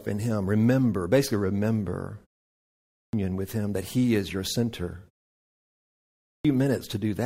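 The output device drops into sleep during pauses and wakes too slowly, causing a clipped start after a pause. At 2.57 s, after "basically remember" and a 0.39 s gap, about 0.56 s of speech is lost. At 5.84 s, after 0.82 s of silence, about 0.61 s is lost, so speech bursts in abruptly.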